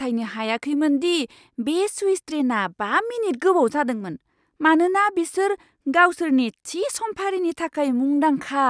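Nothing in the speech stood out as a technical fault on listening.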